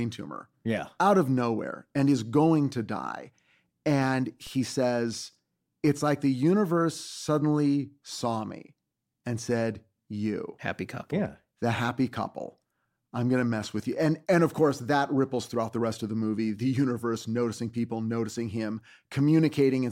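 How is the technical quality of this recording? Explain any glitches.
One glitch stands out. At 4.47 s there's a DC step: the waveform's zero line jumps by about -35 dBFS, then bleeds away through a 20 Hz high-pass, leaving a low thump under the speech.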